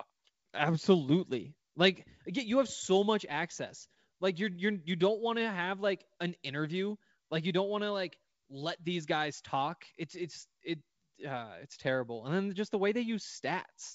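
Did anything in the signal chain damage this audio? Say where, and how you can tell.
No, nothing in the chain damaged this speech: the G.722 wideband telephone coding at 64 kbit/s is doing its normal job, holding the band up to about 7 kHz with no more than the faint upper-band hiss that this codec's coarse high-band quantisation leaves behind.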